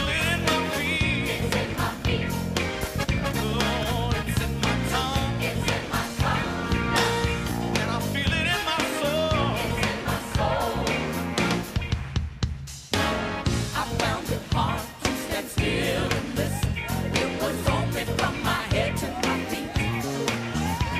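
Single sharp clicks occur at 5.22, 7.39 and 11.36 seconds, each a thin instant tick. These are likely dropped samples: a fraction of a millisecond missing from the stream, so the waveform jumps abruptly to a later value without losing any audible sound.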